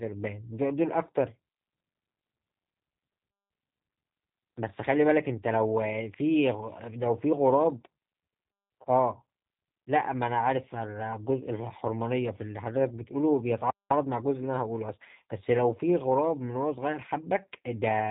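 Throughout, the speech sounds rough and slightly synthetic with nothing above 3.8 kHz: G.729 codec damage, rebuilding speech from a vocal-tract model at what sounds like 8 kbit/s.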